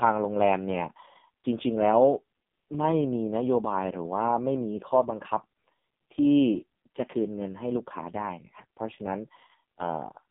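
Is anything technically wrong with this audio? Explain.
Yes. AMR narrowband mobile codec damage runs throughout the speech: a vocal-tract model driven by sparse pulses rebuilds each frame, with nothing above 3.7 kHz and a line band of 150 Hz to 3.6 kHz. The heavy buzzy, synthetic quality points to AMR-NB's lowest 4.75 kbps mode.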